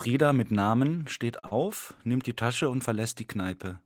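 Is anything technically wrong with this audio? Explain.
Yes, two network faults in this speech clip fall just before "nimmt die".

Short stall from a late packet, 1.39 to 1.45 s: a packet arrived late and the jitter buffer ran dry, so the receiver held the last sound for about 37 ms and then resumed where it stopped. Nothing is lost, but that sound lingers unnaturally, with the playout delay now 37 ms longer.

Short concealed packet loss, 1.47 to 1.53 s: this time about 40 ms of audio never reached the decoder, and the receiver covered the gap by extending the preceding sound for 38 ms before blending back in. It comes across as a brief smear just before "nimmt die".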